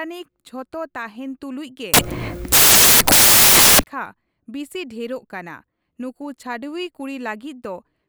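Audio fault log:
1.94–3.84 s, samples built from the wrong bytes: right after "ᱛᱩᱞᱩᱡ ᱜᱮ" the speech is swallowed by a roar of loud, harsh broadband noise lasting about 1.9 seconds. The reader assembled each sample from misaligned or swapped bytes, so the rapidly fluctuating low-order bits landed in the high-order position. Those near-random bits now dominate every value, turning the waveform into broadband noise.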